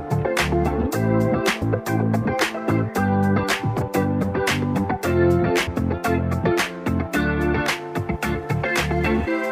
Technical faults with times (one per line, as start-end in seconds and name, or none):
1.61 compressed frames skipped
3.80 compressed frames skipped
5.66 compressed frames skipped
9.26 compressed frames skipped